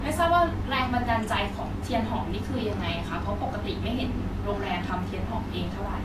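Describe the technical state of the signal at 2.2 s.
At 2.2 s, as across the whole speech clip, nothing sits above 14.2 kHz, which shows as a flat, hard ceiling on the spectrogram, with smeared, watery detail beneath it. This is likely low-bitrate audio saved at a high bitrate: a later MP3 pass cannot restore what the earlier encoding discarded.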